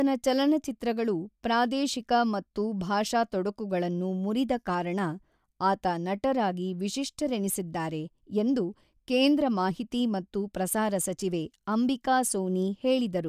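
No technical faults can be heard at any point in the speech, so there is nothing to describe in time order.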